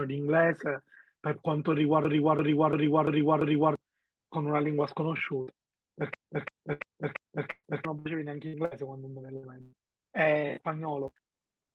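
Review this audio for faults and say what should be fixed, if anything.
A system hang loop occurs twice, from 2.05 to 3.76 s and from 6.14 to 7.85 s. In each, the host or driver stalled while the sound device kept replaying its ring buffer. A 341 ms stretch of speech repeats exactly five times, a stutter at about 2.9 per second, which points to a 16384-sample buffer. About one and a half seconds of speech is lost each time. To prevent it, add a watchdog that mutes output when the buffer stops being refilled, and find the cause of the stall.

A burst of packet loss occurs at 5.41, 6.73, 7.51, 7.99, 8.47, 8.65, 9.37 and 9.61 s. Packets on the call path arrived too late or not at all. The receiver extended the last sound and let it fade, so each gap becomes a short held buzz or a fading hiss, and the speech then resumes further on. Most gaps lose 60 ms of speech. The ones at 7.51 and 9.61 s lose 120 ms, and the one at 7.51 s ends in about 40 ms of silence. 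To prevent it, enlarge the jitter buffer or turn on forward error correction for the network path.

A block size mismatch (truncated) runs from 11.07 s to the end. One stage writes longer blocks than the next stage reads, and the tail of each block is discarded, which fits a 256-sample read. The result is a buzz at 188 Hz, and the speech runs 1.88 times too fast with its timbre kept. To prevent it, make both stages agree on a block size, or add a FIFO between them.

The Opus call path at 32 kbps carries audio up to 12 kHz.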